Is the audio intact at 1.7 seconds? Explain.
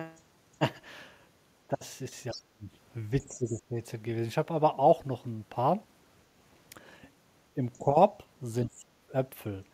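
No, from 1.69 to 1.74 s the speech dips by about 5 dB, likely speech suppressed in double talk as an echo canceller ducked both sides; the waveform shows a brief envelope notch.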